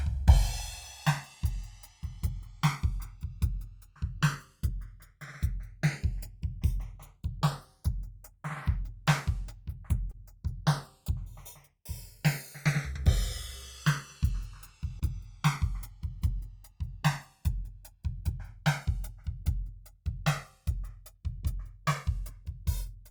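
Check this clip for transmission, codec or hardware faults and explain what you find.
Two faults are present in this music: the channels drift apart over the whole clip, and there are two brief concealed packet losses.

Channels drifting apart runs from start to finish. The left and right channels were captured on devices with independent clocks, mismatched by something like 150 ppm, so the offset between them grows steadily to roughly 2 ms by the end. When the channels are summed to mono, that shifting delay creates comb-filter notches that creep across the spectrum, heard as a slow, gradual flanging sweep.

Short concealed packet loss occurs at 10.11–10.15 s and again at 14.99–15.03 s. Each time, about 20 ms of audio failed to reach the decoder in time, and the receiver filled the gap by extending the preceding sound, following its pitch where it was tonal or substituting shaped noise where it was not, before crossfading back into the real signal. 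The result is a momentary smear or wobble in the music.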